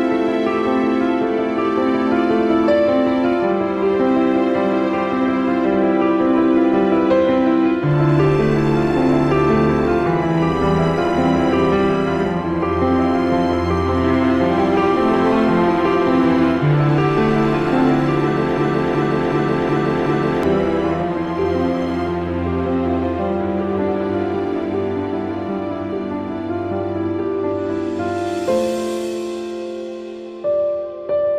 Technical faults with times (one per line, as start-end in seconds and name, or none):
18.58-20.43 system hang loop